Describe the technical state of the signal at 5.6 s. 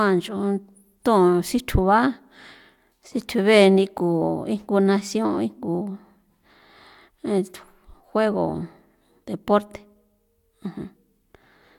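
At 5.6 s the speech signal is intact, with no audible technical fault at that moment.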